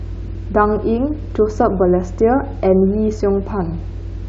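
Speech recording with no audible technical faults.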